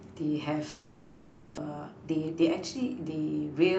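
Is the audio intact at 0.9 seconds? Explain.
No. At 0.9 s the audio sits inside a long network dropout, likely the cause, running from 0.69 to 1.59 s. The receiver stretches the last sound into a fading buzz or hiss for about 0.88 s, never falling to full silence, and when the sound returns, about 0.6 s is simply gone. Unlike a brief packet loss, the gap is long and the lost part never comes back.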